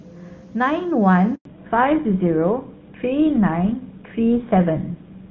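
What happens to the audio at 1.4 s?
At 1.35 s the call hands over between networks in a handover gap: for 100 ms no speech frames arrive, so the speech cuts out abruptly and stays silent until 1.45 s, and whatever was said in that window is lost.

From 1.45 s to the end the call undergoes a fallback to narrowband, dropping from HD Voice to an older narrowband codec, which fits GSM full rate. Nothing above 4 kHz survives, so the speech turns duller and rougher than before the gap.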